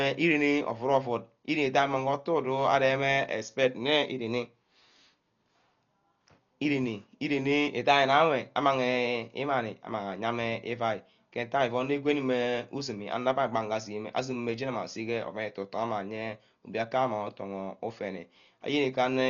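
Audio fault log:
throughout: likely Dolby Digital compression. The speech sounds dull and heavily damaged, with rough, fluttering noise around voiced tones. A spectrogram shows a flat ceiling at 6.9 kHz and blotchy, noise-filled patches below it, which fits a starved bitrate near 40 kbps.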